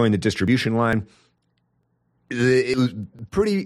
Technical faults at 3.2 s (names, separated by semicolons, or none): audio missing between chunks